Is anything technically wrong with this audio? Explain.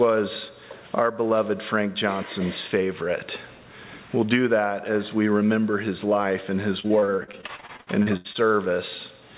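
Yes. From 6.8 to 8.37 s there is repeated packet loss (robotic sound). Audio packets kept going missing or arriving late, and each hole was patched by stretching the last sound forward. Seventeen separate gaps, the longest 81 ms, leave roughly a third of that stretch concealed. It comes out choppy, with pieces dropping out. The band-limited sound, with nothing above 4 kHz, points to a G.711 call path.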